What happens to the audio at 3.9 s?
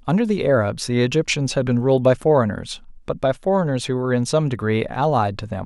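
Nothing goes wrong at 3.9 s: the speech runs through that moment intact, with no dropout, click or other fault.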